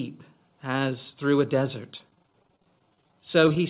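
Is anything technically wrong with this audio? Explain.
Yes. From 1.98 s to the end, the sound turns choppy and robotic: repeated packet loss leaves many short holes, each up to 27 ms, patched by stretching the preceding sound.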